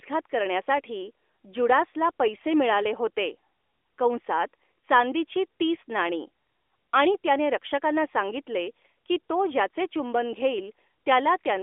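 From 2.38 to 2.45 s, AMR bit errors corrupt the narrowband mobile speech, which otherwise runs through a 300 Hz to 3.5 kHz line. The stretch fits about four 20 ms frames. Some of the weakly protected bits flipped, so misplaced pulses and wrong fine details give a brief hoarse, gargly scratch.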